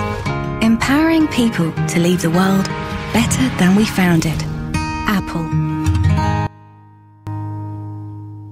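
From 6.47 to 7.27 s, the sound suddenly drops by about 22 dB and stays faint for those 0.8 s before coming back at full level. That deep, abrupt loss is the signature of one channel inverted: with one side's polarity flipped, everything the two channels share cancels once they're summed to mono, leaving only the small difference between them. A polarity flip on one channel is the likely cause here.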